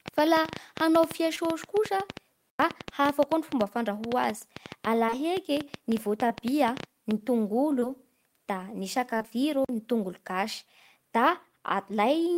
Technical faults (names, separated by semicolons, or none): train of clicks; short concealed packet loss; block of digital silence